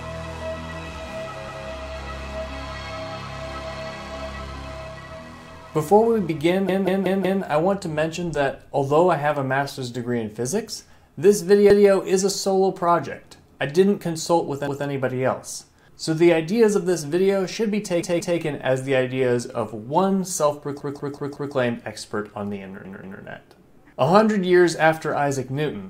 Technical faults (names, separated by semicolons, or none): repeated buffer